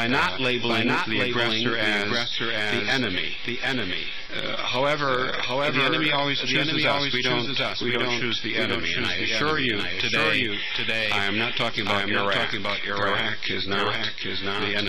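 The sound plays against a full-band copy of itself trailing by roughly 0.7 s at about the same level, a doubled audio track present throughout. The echo has no decay or room colouring, so it reads as a second playback rather than reverberation. On a waveform every transient appears twice, evenly spaced; a spectrogram shows each event repeated at that fixed offset with identical spectral shape. The likely cause is the audio being captured again through a slower path.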